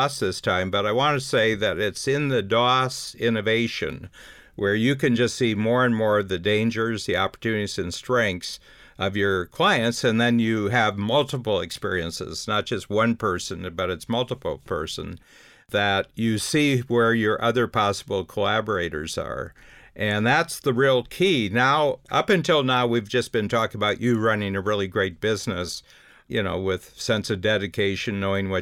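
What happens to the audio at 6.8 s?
Nothing goes wrong at 6.8 s; the speech carries on intact through that moment, with no dropout, click or distortion.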